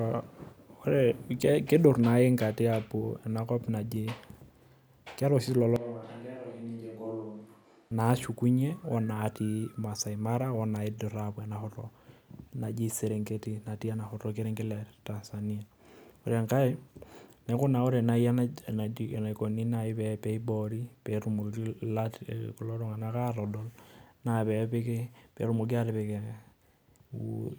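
It's a speech clip where, from 5.76 to 7.91 s, the sound abruptly turns roomy, hollow and thin, drops around 10 dB with more room noise, then snaps back, likely a switch to a distant microphone.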